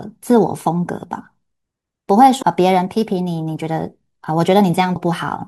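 Damaged data in a compressed stream appears at 2.39 to 2.43 s and again at 4.95 s. Corrupted bytes in those frames make the decoder misread them and lose sync until it finds the next valid header, leaving a brief glitch in the speech.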